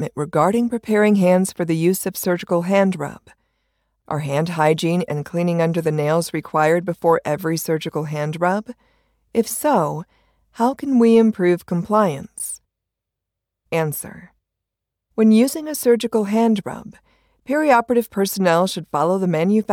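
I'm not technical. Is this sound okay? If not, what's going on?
Yes, nothing stood out as a problem when listening to this recording.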